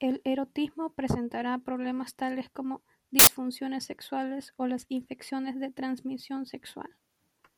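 A short speech clip with a single 80 ms burst of loud, harsh broadband noise from 3.19 to 3.27 s. This is samples built from the wrong bytes: for that stretch each sample's bytes are misassembled, so the rapidly changing low bits land in the high-order position and swamp the signal.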